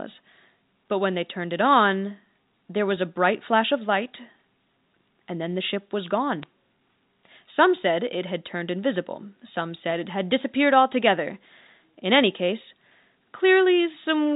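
At 6.42 s, just after "then the ship was", a brief glitch occurs. These are bit errors on a digital phone line. A small fraction of bits flipped on the G.711 telephone path. Each error changes one sample, and a hit on a high bit gives a sharp tick over the unchanged speech.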